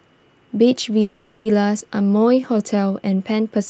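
From 1.01 to 1.47 s a call audio freeze holds the speech for 0.44 s. The last sound smears into a fading buzz or hiss, most likely from delayed packets draining the jitter buffer, seen as blurred, decaying horizontal bands.

At 1.79 to 1.82 s a skip ahead drops roughly a tenth of a second. The waveform jumps abruptly, and a hard vertical seam shows where the two sides join.

From 1.99 to 2.88 s a jitter buffer slow-down stretches the speech to 88% speed, adding 112 ms. Pitch stays put while the spectrogram's repeated, evenly spaced periods elongate each sound. Throughout, the spectrogram tops out near 8 kHz, which fits the Opus call path.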